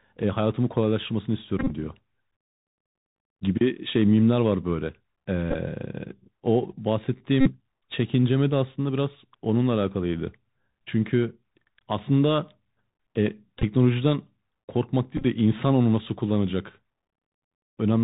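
Speech carried over a Bluetooth CVSD headset codec at 64 kbps, with plainly audible damage: everything above 4 kHz is missing, s sounds turn scratchy, loud bright passages distort as the one-bit delta steps fail to keep up, and a granular hiss sits beneath the speech. Bluetooth headset packet repeats occur at 1.59–1.71 s, 5.51–5.56 s, 7.41–7.52 s, 13.59–13.63 s and 15.17–15.25 s. At these points lost voice packets were decoded again from the previous packet's bits, so the 3.75 ms repetition produces a short buzz near 267 Hz. The longest affected stretch is at 1.59 s, where the losses total 78.8 ms and the bursts run to roughly 30 ms.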